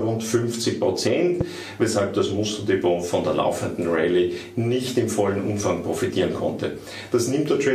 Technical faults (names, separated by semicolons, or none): loud pop